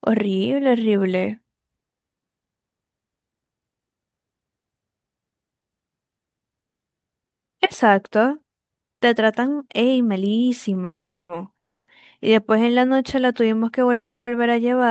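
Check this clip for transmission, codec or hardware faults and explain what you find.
Yes, there are two kinds of fault in this speech clip: three call audio freezes and one jitter buffer slow-down. The band limit near 8 kHz is consistent with a wideband call codec.

Call audio freezes occur at 10.84–11.30 s, 11.58–11.88 s and 13.92–14.28 s. Packets were likely held up, which emptied the jitter buffer. In the first and third the last sound briefly trails off before the silence; the silences last 360, 290 and 260 ms respectively. Speech resumes where it stopped, with nothing lost. A spectrogram shows a blank column, preceded by a short smeared tail in the first and third, and the waveform runs flat.

A jitter buffer slow-down runs from 12.68 to 13.21 s. The receiver repeated single pitch periods to rebuild its reserve, adding 39 ms, which puts the speed at about 94%. The speech sounds drawn out but keeps its pitch. 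The waveform shows identical repeated cycles, and the spectrogram shows harmonics stretched horizontally.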